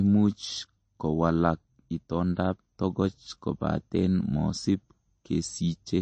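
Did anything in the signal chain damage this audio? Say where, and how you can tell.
Yes. Throughout, the speech sounds watery and swirly with nothing above 8.4 kHz, which points to the codec stage: likely MP3 compression near 32 kbps, truncating treble.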